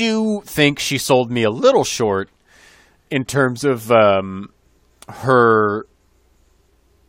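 Nothing stood out as a technical fault on listening to this speech recording.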